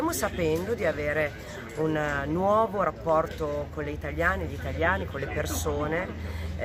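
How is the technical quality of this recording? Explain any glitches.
The technical quality of this recording holds up, with no glitches to explain.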